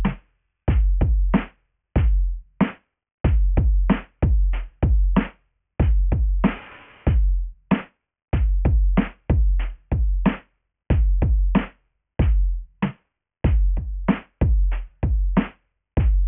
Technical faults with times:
0.00-16.28 aliasing

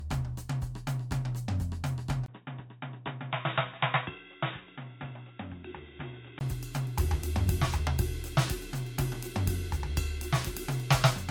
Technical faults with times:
0.00-11.30 generation loss
2.26-6.41 input switched to a poorer device

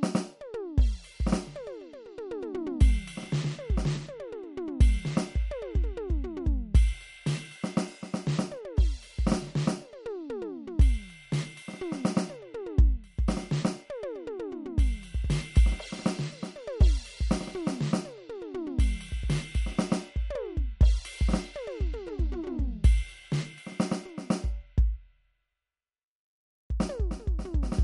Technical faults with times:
0.00-27.83 MP3 compression

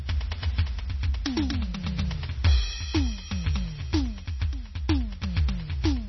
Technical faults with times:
0.00-6.08 MP3 compression

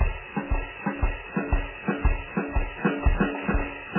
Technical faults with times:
0.00-3.99 MP3 compression

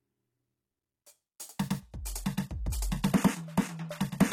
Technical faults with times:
1.80-4.32 adaptive stream at a lower bitrate

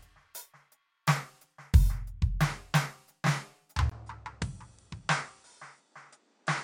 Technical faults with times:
3.89-6.64 input switched to a poorer device

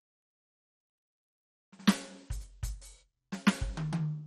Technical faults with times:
0.00-4.26 MP2 compression

